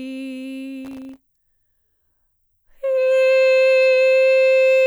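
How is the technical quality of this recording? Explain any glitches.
The music has one glitch, from 0.85 to 1.17 s: processor overload crackle. The processor missed around twenty tiny buffer deadlines, leaving brief silent gaps that sound like gritty tearing.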